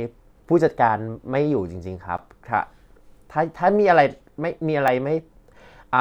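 Speech with two blocks of digital silence: about 10 ms at 2.18 s and about 1 ms at 4.88 s. Both are short enough to be heard as a tick or dip rather than silence. This points to an output buffer not filled in time.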